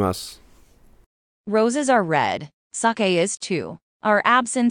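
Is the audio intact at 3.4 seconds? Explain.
No. At 3.37 s the speech drops into a silence of about 43 ms, ending at 3.42 s, with blurred edges, then carries on where it stopped. It is a gap at a join of encoded pieces, from 2-second segments encoded separately and joined without trimming encoder delay and end padding.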